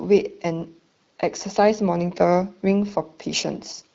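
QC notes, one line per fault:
No faults heard.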